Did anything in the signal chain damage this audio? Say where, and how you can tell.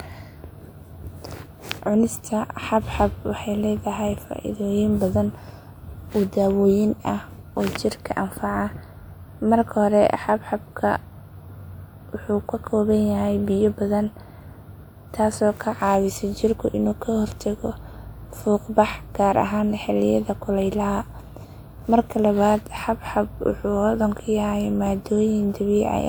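No, nothing in the chain audibly damages this speech recording at any stage.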